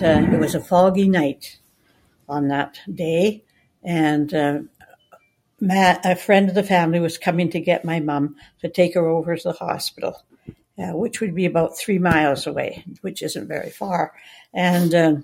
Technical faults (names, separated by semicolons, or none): noise suppressor applied to music or sounds; sound cut by the noise suppressor